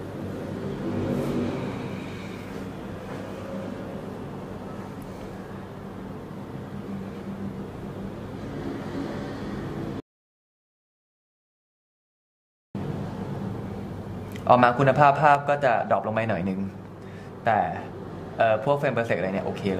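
The input was likely lost for a while with zeros still being written, an audio dropout to silence from 10.00 to 12.75 s that leaves about 2.75 s of total dead air with no room tone. A gain setting was likely switched without a ramp, producing a sudden gain jump at 15.35 s: sound and background drop together by about 5 dB and stay lower to the end.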